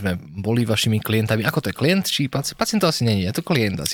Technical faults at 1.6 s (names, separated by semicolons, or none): GSM signalling bursts